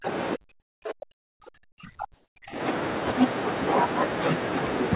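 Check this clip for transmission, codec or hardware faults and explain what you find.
Two faults are audible in the speech, both in the first 2.6 s of the clip.

Speech suppressed in double talk, at 0.00 to 0.07 s and 0.35 to 2.61 s. The level drops in pieces by up to about 40 dB. The likely cause is an echo canceller that could not separate the near talker from the overlapping far-end echo. It then turned the near talker down as well.

Comfort noise in place of the background, at 0.60 to 0.82 s, 1.12 to 1.40 s and 2.14 to 2.36 s. The real background sits about 35 dB below the speech. It likely was not sent during these pauses, so the receiver filled them with steady, featureless synthetic noise. The fill is about 8 dB and 9 dB quieter in the first two gaps and about 12 dB louder in the third.

Nothing is heard above 4 kHz, which fits a narrowband G.711 call path.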